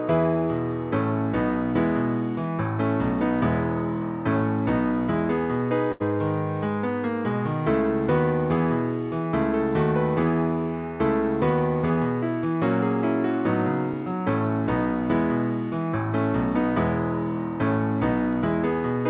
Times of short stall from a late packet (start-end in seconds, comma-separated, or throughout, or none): 5.92-6.02